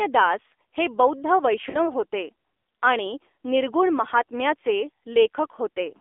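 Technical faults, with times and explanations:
throughout: AMR narrowband mobile codec. Speech is confined to 300 Hz to 3.6 kHz with a buzzy, synthetic edge from sparse pulse excitation, which fits a low 7.4 kbps mode. That edge distinguishes it from a plain telephone band-limit.
1.70–1.89 s: lost AMR speech frames. Sound smears and fades before "होते आणि निर्गुण महात्म्याचे", fitting two lost 20 ms frames concealed by repeating fading parameters rather than a hard silent gap.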